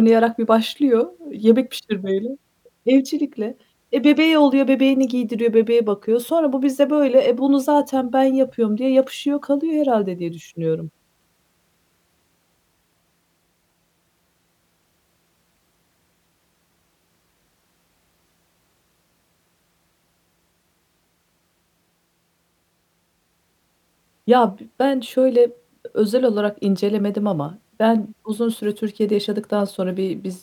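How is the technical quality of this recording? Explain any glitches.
No technical faults are audible.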